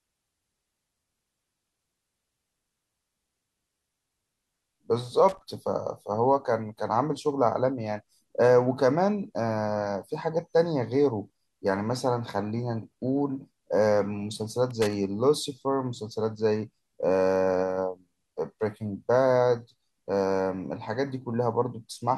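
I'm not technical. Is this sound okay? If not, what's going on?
No. Loose connector crackle at 5.29 to 5.39 s and again at 14.71 to 14.93 s: a worn or dirty plug contact flickers on and off as it shifts, chopping the sound into short, irregular bursts of crackling and scratching.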